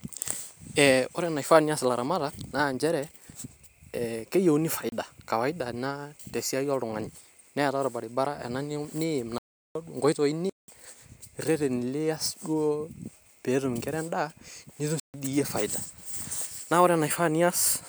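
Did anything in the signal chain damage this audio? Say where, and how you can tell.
Yes: blocks of digital silence at 4.89, 9.38, 10.50 and 15.00 s, 32 to 372 ms, cutting out and back with no fade. The driver buffer likely wasn't filled in time.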